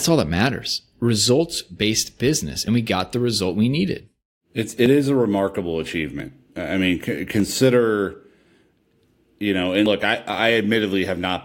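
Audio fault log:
1.82, 2.68, 4.86, 6.2, 7.4 and 9.86 s: dropped buffer (overrun). Each is a small jump forward in the speech, with no gap. About 20 ms goes missing at most points, more at 6.2 s, after "is a remarkable", and most at 9.86 s, before "look I". The likely cause is samples not being collected before the hardware overwrote them.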